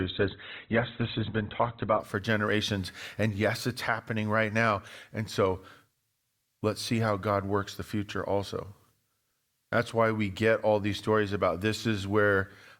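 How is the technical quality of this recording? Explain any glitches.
The recording has one glitch, at the very start. From 0.0 to 2.0 s, the speech is dull and thin, with nothing above about 4.1 kHz. Codec artefacts are also stronger. This is an adaptive stream starting at a low bitrate. The player began on a cheap version, which fits Opus at 12 kbit/s. Once it had gauged the connection, it switched to a richer one, near 64 kbit/s. At 2.0 s the treble returns abruptly, without any gap.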